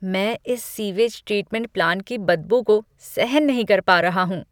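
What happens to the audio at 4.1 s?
Nothing goes wrong at 4.1 s; the speech there plays through intact, with no dropout, click or distortion.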